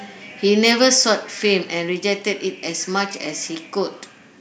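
From about 0.65 to 0.87 s the speech picks up a harsh, crackly edge on its loudest moments. That's microphone overload: the signal runs roughly 2 dB past what the converter can hold, so the tops of the biggest peaks get sheared flat, around one percent of the samples in that stretch. The flattened peaks add gritty distortion. The likely cause is an input gain set a bit too hot.

Then at 1.02 s the microphone volume is stepped down. Everything, speech and background alike, drops by about 3 dB in one abrupt step. Coming right after that distorted burst, it sounds like the call software likely noticed the clipping and pulled the device's input level back in a single jump. You hear an audible dip in loudness rather than a smooth fade.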